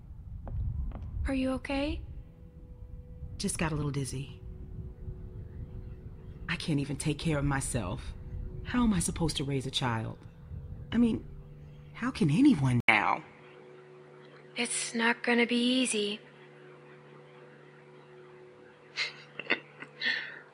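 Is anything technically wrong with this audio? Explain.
Yes. At 12.80 s the sound turns duller and stays that way to the end. The likely cause is the input switching to a poorer device, which passes a narrower band. An 80 ms silence marks the switch, after which nothing is present above 10.5 kHz, the level shifts by around 5 dB, and a faint new noise floor appears well below the signal. On a spectrogram the top band goes dark from that point; the waveform shows a brief flat gap and a step in amplitude.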